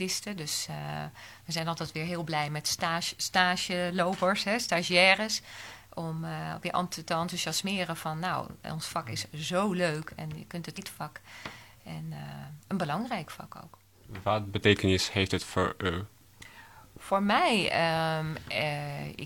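At about 10.73 s the sound jumps abruptly forward, with a brief blip lasting until roughly 10.79 s, and then carries on from a later point rather than continuing where it left off. The pattern is that of a stream segment skipped: one chunk of the segmented stream likely failed to arrive or load, so the player abandoned it and moved straight to the next segment, dropping that stretch of the programme and splicing the two sides together.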